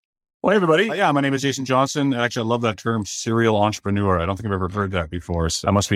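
No technical faults can be heard in this speech recording. There are no events to mark on its timeline.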